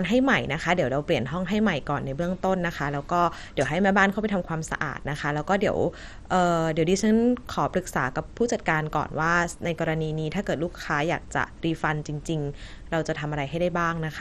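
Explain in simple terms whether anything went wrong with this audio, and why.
The speech sounds dull and gurgly all the way through, with a grainy edge and nothing above about 13.7 kHz. That's most likely heavy MP2 compression: the encoder ran short of bits, so it dropped the top bands and roughly approximated the rest.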